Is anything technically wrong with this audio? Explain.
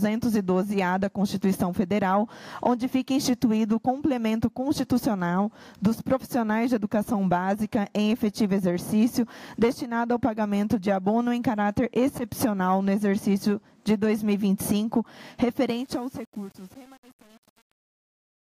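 Yes. Truncation distortion on a fade runs from 15.68 s to the end at 18.47 s, and it is worst from about 15.8 s onward. As the fade-out's level drops, the gain stage rounds each sample to a coarse grid without dither. The graininess suggests about 7-bit resolution. The tail turns gritty. On the waveform the decay becomes flat square steps. A spectrogram shows broadband harmonic hash.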